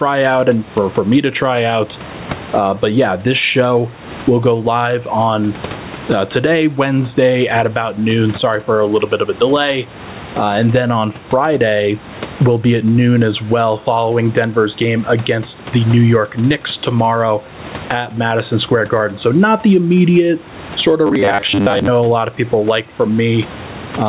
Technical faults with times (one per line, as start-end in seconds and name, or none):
0.00-24.08 gain pumping
21.07-21.88 robotic sound from repeated short buffers